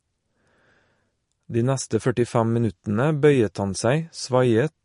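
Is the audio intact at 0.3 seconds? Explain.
No. At 0.3 s, as throughout the speech, likely MP3 compression at a low bitrate, consistent with around 43 kbps, has removed everything above 10.5 kHz and zeroed weak frequency lines that flicker between frames, giving a dull, watery, swirly sound with smeared attacks.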